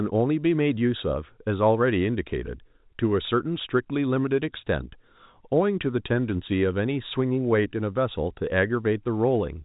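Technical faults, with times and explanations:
No technical faults can be heard in this speech. It carries the narrow band of G.711 telephone coding, with nothing above 4 kHz and a faint quantisation noise following the level of the speech.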